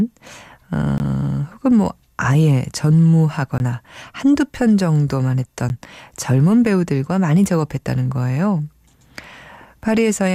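A block of digital silence hits the speech three times: 0.98 to 1.00 s, 3.58 to 3.60 s, and at 5.69 s. Each time, a run of samples drops straight to silence with no fade in or out. The jump to silence and back is abrupt. The two 20 ms gaps sound like short holes, and the 10 ms gap at 5.69 s is closer to a tick or dip.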